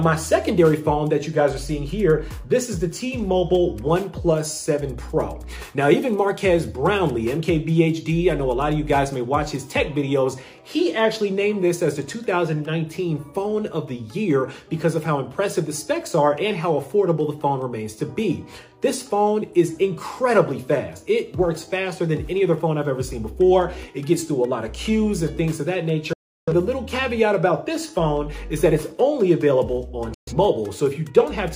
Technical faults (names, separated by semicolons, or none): digital broadcast dropout